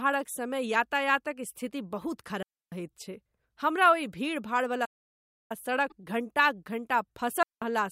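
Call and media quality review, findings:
Digital wireless dropout, 2.43 to 2.72 s. Clean hole of about 290 ms after "स्थिति बहुत". Sound resumes on "छै हमरा ओहि". Wireless receiver. Link lost too much data, so the receiver muted behind a very short fade. No noise burst before or after.

Digital wireless dropout, second event, 7.43 to 7.62 s. Same clean near-silence, about 190 ms. Same receiver mute behaviour. No crackle or hiss at the edges.

Playback stall, 4.85 to 5.52 s. Speech stops mid-flow. Silence lasts about 650 ms, then the audio carries on. Player side, likely a buffer running dry or a blocked playback thread. Output holds silent until data flows again.

Damaged data in a compressed stream, 5.87 to 5.92 s. Brief glitch, about 50 ms. Decoder side. Bad bytes in the compressed frames there. The decoder misreads them, loses sync and hunts for the next valid frame header.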